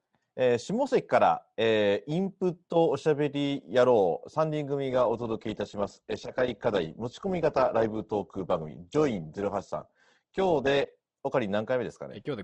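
Speech, in which the adaptive stream drops to a lower bitrate from 4.90 to 10.90 s, which fits a switch from a fuller encoding to a very lean one. Treble disappears above 8.2 kHz and codec artefacts thicken, with abrupt quality changes at both edges and no gap.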